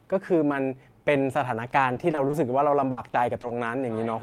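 From 1.93 to 2.35 s and again from 2.91 to 3.51 s, repeated packet loss (robotic sound) chops the speech. Short dropouts, up to 60 ms in the second stretch, are patched by extending the last sound, giving choppy speech with pieces missing that shows as repeated, smeared spectral slices.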